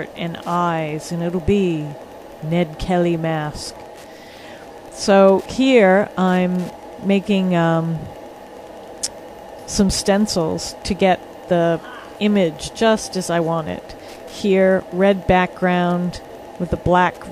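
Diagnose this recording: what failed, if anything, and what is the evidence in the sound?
Wi-Fi interference in the analogue wiring: steady ticking every 102.4 ms, about ten a second throughout, roughly 35 dB down, from a nearby radio's beacons being rectified.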